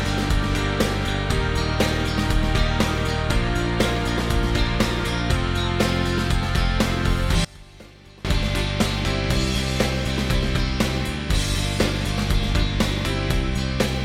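From 7.45 to 8.25 s the sound suddenly drops away, roughly 23 dB quieter, then comes back. What's left in that stretch is like a faint ghost of what was there. That's the signature of one channel inverted: likely one side flipped polarity, so when the two channels sum to mono, everything they share cancels out. Only the small difference between left and right survives, which is why it sounds so weak.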